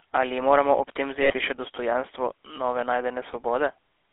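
The whole clip runs through the GSM full-rate codec, so the speech is squeezed into a narrow phone band of roughly 300 Hz to 3.5 kHz, and you get that buzzy, gravelly roughness from a coarse pulse-driven excitation, which fits a 13 kbps full-rate channel. The damage is plainly audible.

At 1.22 s there are lost GSM frames. The decoder keeps repeating the last good frame until about 1.32 s, so the sound hangs as a short metallic ring, consistent with roughly four dropped frames.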